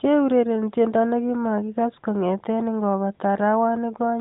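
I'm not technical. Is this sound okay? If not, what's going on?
Yes, this sound is okay, and nothing is going wrong in it.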